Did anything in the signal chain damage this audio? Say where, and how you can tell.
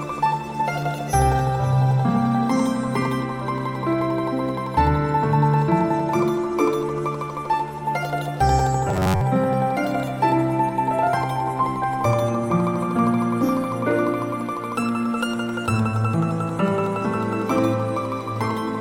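Yes. From 8.89 to 9.22 s the sound turns into a rigid, metallic buzz locked at 93.8 Hz. This is robotic sound from repeated short buffers, likely a starved driver or buffer stage. It loops a roughly 10.7 ms chunk, replacing most of the real audio.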